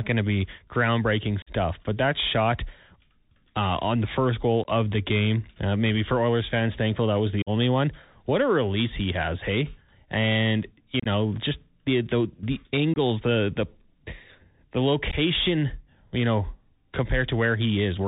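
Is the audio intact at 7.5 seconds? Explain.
No. Right after "fans thankful that was", from 7.42 to 7.50 s, the speech drops out in a sudden hole with hard edges, and when it resumes it is briefly quieter. This is unconcealed Bluetooth headset packet loss. About 45 ms of audio never arrived, which fits a run of several short headset voice packets going missing in a row. Nothing was done to smooth over the gap, so silence or an idle pattern filled it.

The same moment also carries the Bluetooth CVSD headset codec damage heard across the whole clip. The sound is muffled and narrowband, with nothing above 4 kHz, and a granular hiss sits beneath it. S sounds come out scratchy, and loud high-frequency content distorts. The sound fits a 64 kbps CVSD link. That codec sends one bit per sample telling the decoder to step up or down, with an adaptive step size that cannot keep pace with fast, bright changes in the signal.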